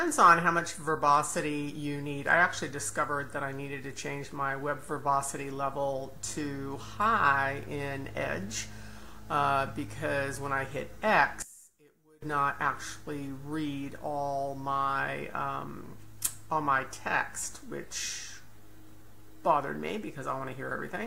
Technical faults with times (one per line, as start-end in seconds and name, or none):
11.42-12.22 one channel inverted